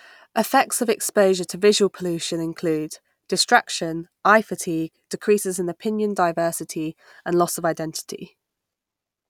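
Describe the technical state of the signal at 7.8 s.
At 7.8 s the speech signal is intact, with no dropout, distortion or other fault to be heard.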